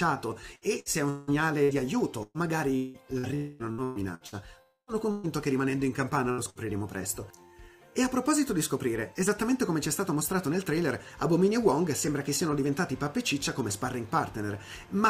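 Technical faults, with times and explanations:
0.55–4.35 s: repeated packet loss (robotic sound). Eleven short holes open in under four seconds, the longest about 0.18 s. Each is patched by looping the last bit of sound, so roughly a quarter of the stretch, about 1 s in all, is synthetic fill. That gives the choppy, robotic texture. On a spectrogram, flat horizontal smears interrupt the normal patterns. In the waveform, the repeats show as short, overly regular cycles.
3.35–3.62 s and 4.62–4.90 s: long network dropout. Both times the sound stalls into a fading buzz or hiss for about a quarter of a second, then resumes further on with about 0.24 s of material missing. The first gap is filled right up to the restart. The second fades into about 70 ms of silence before the sound returns. This is likely an interruption in arriving audio. A spectrogram shows a frozen, decaying band, and the second gap ends in a blank column.
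5.11–5.26 s, 6.31–6.41 s and 6.50–6.58 s: burst of packet loss. These are shorter holes of about 120 ms, 60 ms and 60 ms. In each, the receiver prolongs the last sound while turning it down, then jumps ahead with that span missing. The last two, only about 0.1 s apart, make a brief double stutter. The waveform shows small tapering repeated segments, and on a spectrogram each appears as a short smeared stripe.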